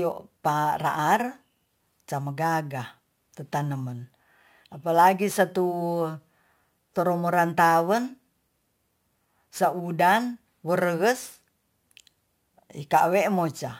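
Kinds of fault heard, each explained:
Crude rate conversion: The speech was stretched to a higher sample rate by repeating samples without filtering. The repeating error pattern fits a step from 32 kHz to 44.1 kHz. Throughout, a gritty, inharmonic fizz sits roughly 25 dB below the speech and tracks its louder, brighter parts.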